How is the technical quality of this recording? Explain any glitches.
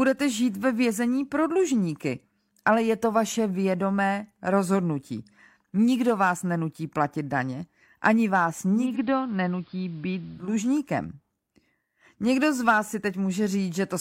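The recording has one glitch. At 8.71 s, just after "platit daně ani vás", digital radio blends to analogue: the receiver lost its digital signal and cross-faded over 279 ms to the station's AM broadcast, returning at 10.57 s. Hiss rises to roughly 35 dB below the speech, the treble drops, and the level falls by about 2 dB. On a spectrogram, the upper frequencies thin out for that span, with a faint noise floor underneath. The waveform dips slightly.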